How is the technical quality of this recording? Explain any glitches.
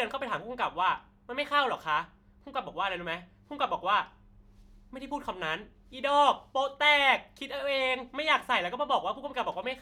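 No technical glitches can be heard in this speech recording. There is nothing in it that needs explaining.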